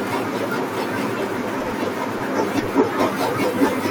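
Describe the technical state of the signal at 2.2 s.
At 2.22 s the speech is broken by a very brief burst of damaged data in the compressed stream. The fault lasts under 20 ms. Part of the encoded data at that point is corrupt. The decoder cannot read those frames correctly. It loses sync and hunts for the next valid frame header before decoding resumes. The result is a short synthetic chirp or blip that cuts across the speech for an instant.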